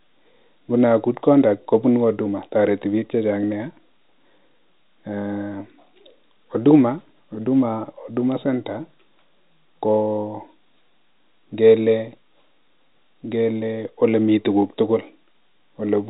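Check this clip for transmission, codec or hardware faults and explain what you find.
Listening closely to the speech, which carries the narrow band of ordinary G.711 telephone coding, nothing stood out as a problem.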